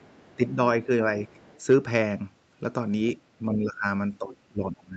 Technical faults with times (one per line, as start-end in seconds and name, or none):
0.00-0.48 other side's voice leaking through
0.36-0.58 speech suppressed in double talk
0.85-0.89 speech suppressed in double talk
1.25-1.61 other side's voice leaking through
3.39-3.86 speech suppressed in double talk
4.19-4.96 speech suppressed in double talk